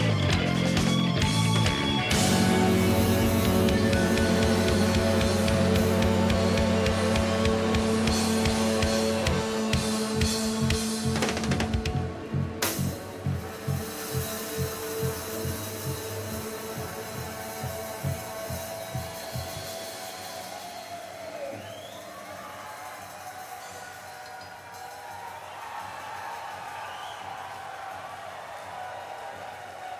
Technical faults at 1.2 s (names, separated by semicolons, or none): none